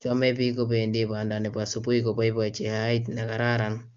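No fault can be heard; the speech carries the narrowed bandwidth of AMR wideband (HD Voice) coding at 23.85 kbit/s, with nothing above about 7.2 kHz and codec damage faint at most.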